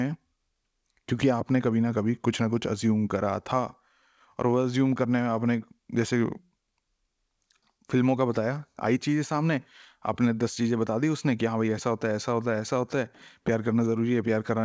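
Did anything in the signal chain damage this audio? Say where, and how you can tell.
No, nothing in the chain damaged this speech; it came through a WebRTC call path that appears to be working normally, with the band stopping at 8 kHz and the coding texture of a wideband call codec, which fits G.722 at 64 kbps.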